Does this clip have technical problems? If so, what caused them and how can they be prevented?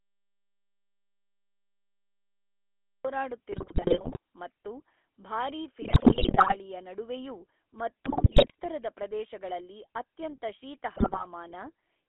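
Yes. The clip shows three kinds of fault.

GSM full-rate codec: Throughout, the speech has the buzzy, gravelly roughness of the original GSM full-rate codec. It reconstructs the voice from a vocal-tract filter driven by a thinned, regularly spaced pulse excitation, and that pulse structure is what gives the buzz. The sound is confined to a 300 Hz to 3.4 kHz telephone band, and the damage is plainly audible, which fits a 13 kbps GSM channel. Prevention: record or transmit through a wideband codec, or capture locally rather than over a GSM call.

Audio dropout to silence: From the very start until 3.05 s there is silence, with no room tone at all, and then the sound comes in mid-flow. The likely cause is a lost input, such as a disconnected device, a failed link or a mute, while the recorder kept writing silence. Whatever happened during that stretch is unrecoverable. Prevention: confirm input signal and connections on a level meter before recording begins.

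GSM bit errors: Four bursts of squawks, pops and gargling break up the speech at 3.52–4.18 s, 5.82–6.57 s, 8.04–8.56 s and 10.96–11.25 s. Corrupted bits reached the decoder and scrambled its filter, pitch and gain parameters, so individual frames come out with a distorted spectrum or sudden level jumps. The density of the damage fits an error rate of roughly 4 to 5 percent on a weak radio link. Prevention: ensure strong signal coverage or use a wired or IP connection.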